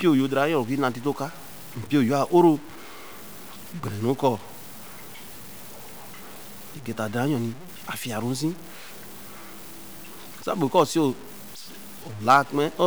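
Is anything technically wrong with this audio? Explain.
Yes. Throughout the speech, a grainy distortion rides on the signal, rising and changing with it, sitting around 20 dB below the level. Quiet passages turn gritty or sputter. This points to low bit depth without dither, likely truncation to roughly 7 bits, leaving error tied to the signal.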